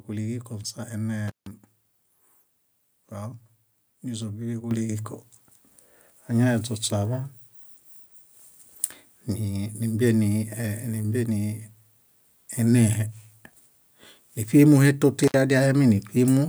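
A speech clip with two technical faults. An intermittent contact cuts the signal from 1.28 to 1.47 s, an opening of about 149 ms, and again from 15.24 to 15.34 s, about 64 ms. A loose cable or plug breaks the circuit, leaving crackle at each edge and near-silence while open. At 4.71 s the microphone volume is stepped up by about 8 dB in a single jump, as the call software raises the input level, so voice and background get louder together.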